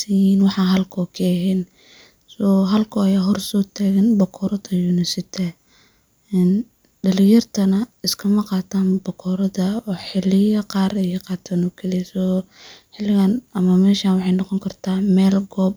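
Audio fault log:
No faults: the speech signal is technically intact, with nothing in its level, timing or continuity that departs from normal.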